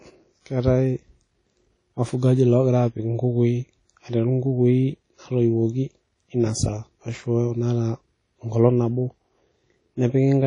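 From start to finish, the speech carries plainly audible WMA compression damage. Nothing is present above 10.1 kHz, so the top end sounds dull and closed in. Transients ring and smear, and a washy hiss rises and falls with the speech. The cause is likely a Windows Media Audio encoder using long transform blocks. These spread quantisation noise over tens of milliseconds. The damage fits a low bitrate near 32 kbps, where weak spectral lines are simply zeroed.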